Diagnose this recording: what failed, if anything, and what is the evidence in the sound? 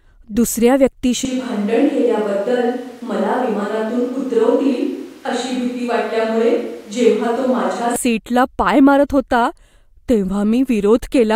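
From 1.25 s to 7.96 s the speech turns abruptly roomy and hollow, loses low end, drops about 5 dB and sits over room noise roughly 30 dB down, then snaps back. At the capture stage, the close microphone likely dropped out, leaving a switch to a distant microphone.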